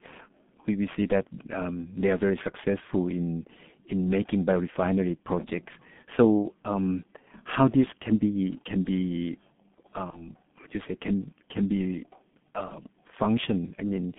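Throughout the 14-second speech clip, the G.723.1 codec is at work. The sound is confined to a telephone band of roughly 150 Hz to 3.5 kHz, and the damage is heavy. Its 30 ms frames and slowly updated voice model leave speech muffled and hoarse, with smeared consonants, which points to a rate of about 6.3 kbit/s. Plain band-limiting would dull the top end but keep consonants crisp; the rasp and blurring here come from the coarse coding itself.

From 10.10 to 10.29 s, VoIP packet loss concealed by the speech codec appears just before "you say can can". The gap fits a single lost 30 ms frame, but the decoder fills it by extending its last pitch and filter at falling gain. What follows is a brief stretched sound that fades, and the voice stays weakened for well beyond the missing frame while the decoder recovers. A second instance runs from 12.68 to 12.74 s, again consistent with one lost frame, and it is shorter. 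Unlike a plain dropout, neither instance produces silence or a click. Each is a smeared continuation of the preceding sound that fades rather than cutting off.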